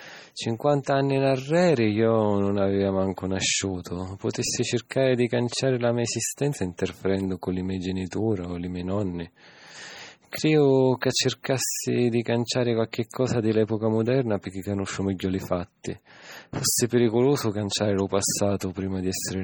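Throughout, heavy MP3 compression likely causes watery, swirling speech, consistent with a very low bitrate around 32 kbps. A spectrogram shows flickering holes and nothing above 20.5 kHz.

At 8.11 s and 18.60 s, pre-echo puts a short hiss about 17 ms before sharp attacks, softening them; the waveform shows low noise preceding each onset.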